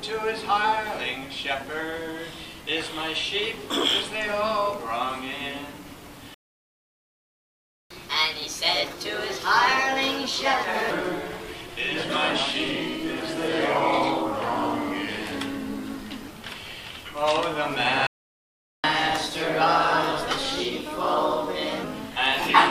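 At 6.34 s the player likely ran out of buffered data, a playback stall: the sound cuts out mid-flow for 1.56 s, resuming at 7.90 s. The player then works through its backlog by resampling faster, a catch-up at higher speed: from 7.90 to 10.91 s the audio runs at 1.25 times normal, pitched up about four semitones, before settling back. A second stall, likewise likely from buffer starvation, silences the sound from 18.07 to 18.84 s, 0.77 s. A milder catch-up follows, with 1.15 times speed and pitch roughly two semitones higher from 18.84 to 21.84 s.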